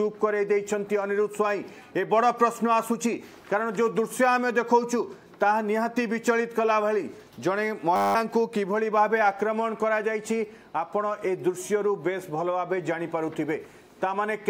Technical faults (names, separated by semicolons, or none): system hang loop